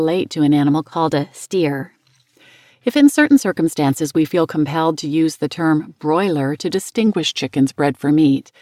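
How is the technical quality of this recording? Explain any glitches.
The recording has two noticeable glitches where the speech briefly runs at the wrong speed and pitch.

From 0.72 to 2.20 s the speech speeds up by 6.15% and rises about a semitone (103 cents), then snaps back. From 7.07 to 8.08 s it slows by 6.15% and drops about 110 cents. This is a drift correction step, likely from clock-matching software abruptly changing the playback rate to refill or drain its buffer, which shifts speed and pitch together.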